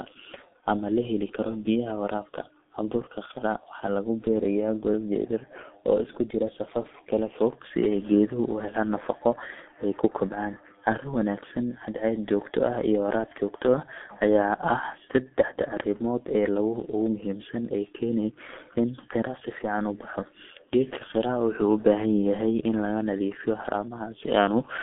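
Speech with heavy G.723.1 codec damage throughout, sounding muffled and hoarse with smeared consonants, consistent with a 6.3 kbit/s stream. A spectrogram shows a 200 Hz–3.5 kHz band, empty above 3.7 kHz.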